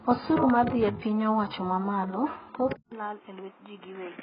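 Speech runs dull and smeared from start to finish, with a warbling, fizzy edge on sibilants and nothing above 5.2 kHz. The likely cause is heavy AAC compression, AAC-LC at a very low bitrate, which fits about 12 kbps: the encoder drops the top band and leaves holes where quantised frequency lines were discarded. At 2.73 s there is a gap of about 0.19 s. From there to the end the sound is boxier, noticeably quieter and cut off above 3.8 kHz, with a faint new noise floor well below the speech. These are the marks of an input switched to a poorer device, likely a lesser microphone or a headset's call profile taking over mid-recording.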